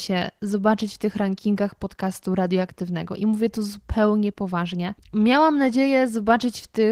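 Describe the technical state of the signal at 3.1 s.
At 3.1 s the speech carries Opus voice compression, present across the whole clip. A linear-prediction coder handles the band below 8 kHz, with a coarse upper layer above, in 20 ms frames. The excitation sounds muffled and hoarse, slightly robotic, fitting roughly 16 kbps.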